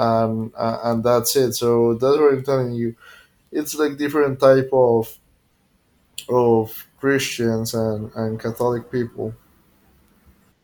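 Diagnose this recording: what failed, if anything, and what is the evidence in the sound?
Nothing in this speech recording points to a failure at any stage of the chain, from capture through to playback.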